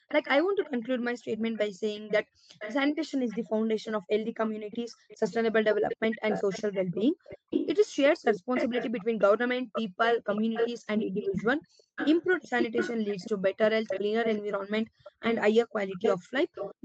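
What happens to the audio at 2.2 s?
At 2.2 s the speech carries an echo leak, lasting from 0.08 to 2.75 s: a faint copy of the voice trails 382 ms behind, well below the direct sound, likely from a far-end loudspeaker whose echo canceller missed some pickup. Spectrograms show the harmonic pattern repeated, fainter, 382 ms later.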